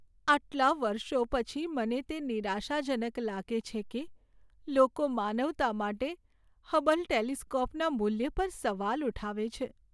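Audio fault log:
No fault is logged for this speech clip.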